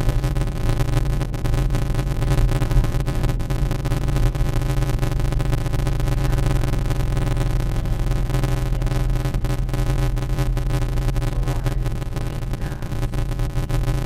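From start to end, a block size mismatch (padded) zero-fills each block's tail, giving an 86.1 Hz buzz and audio at 0.625 speed yet normal pitch, unlike resampling errors, which fits a 512-sample read.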